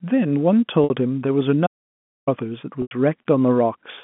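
At 0.84 s the speech hits packet loss with pitch repetition. About 60 ms of audio is missing, which fits two lost 30 ms packets, and the receiver fills it by repeating the last pitch period. The result is a brief held, buzzy tone before the speech resumes through a short cross-fade, all heard within the narrow telephone band of the G.711 line.

From 1.67 s to 2.27 s comes an audio dropout to silence lasting about 0.6 s. The signal stops in mid-flow and the gap is silent, with no room tone and no line noise. Whatever was said in that stretch is gone, and the speech resumes abruptly at 2.27 s. The likely cause is the input being lost, through a disconnected device, a failed link or a mute, while recording carried on writing silence.

At 2.82 s there is a second packet loss with pitch repetition, covering about 90 ms, which points to three lost packets. The repeated pitch period holds for the first part of the gap and then fades over about 50 ms, so this one is heard as a buzzy sustain that thins toward silence before the speech cross-fades back in at 2.91 s.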